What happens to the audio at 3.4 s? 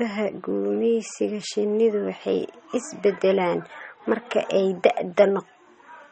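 At 3.4 s you're hearing the same thing that runs through the whole clip: MP3 compression, and it's plainly audible. Nothing comes through above about 8.4 kHz, so the treble is shut off, and the speech has that watery, swirly texture from weak frequency detail blinking in and out frame to frame. That's likely the encoder starving for bits and dropping the top end and quiet components, which fits a low bitrate around 32 kbps.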